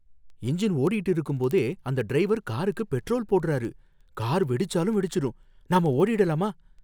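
From about 0.16 s right through to 6.79 s, the speech carries word clock ticks: a steady train of sharp clicks of uneven strength, roughly fourteen a second, so around a hundred in all. That pattern fits a receiver sitting on a digital link while running off its own clock rather than locking to the sender's. The two drift apart by something like 300 ppm, and every time they slip past each other a single sample gets dropped or doubled, leaving a tick.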